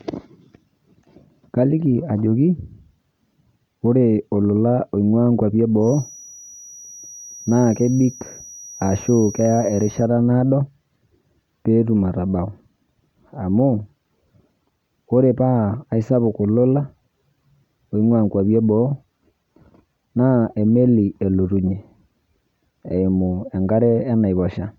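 From 5.79 to 10.09 s, after "ore olola oing'uaa nkuapi", a thin feedback whistle at 5.8 kHz sits well below the speech, likely a loudspeaker-to-microphone loop at the edge of feedback, appearing as a steady horizontal spectrogram line.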